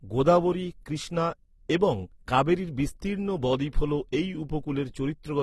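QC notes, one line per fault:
Throughout: transcoding between lossy codecs. Nothing in the speech reaches above 12 kHz, and two different sets of coding artefacts sit on top of each other. The likely cause is a low-bitrate Opus encode re-encoded to AAC-LC, which wastes bits on the earlier damage and adds its own.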